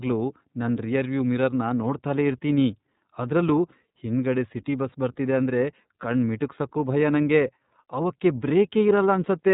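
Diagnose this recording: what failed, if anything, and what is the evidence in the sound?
Throughout, the speech sounds band-limited and plainly rough and synthetic, with nothing above 3.8 kHz: iLBC codec damage, coding each 30 ms frame independently, fitting 13.33 kbps.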